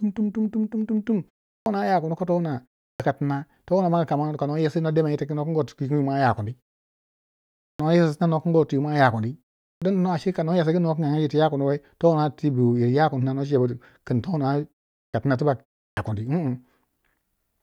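Clipped start after a pause at 1.55, 2.89, 7.69, 9.71, 15.03 and 15.87 s. After each silence of about 0.3 to 1.15 s, the output device needs time to wake, so roughly the first 100 to 110 ms of speech is swallowed and words begin abruptly.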